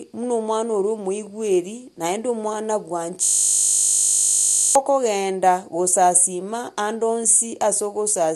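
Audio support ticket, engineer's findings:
System hang loop, 3.24–4.75 s, directly after "naende omwana". Speech replaced by a steady 50 Hz buzz: one 20 ms slice of audio repeating exactly, roughly 75 times. Probable component: audio driver or host process stalled while the output hardware kept replaying its ring buffer. The 20 ms period points to a short period or buffer size. The loop is too short to stutter and fuses into a tone at the loop rate. Normal playback resumes at 4.75 s.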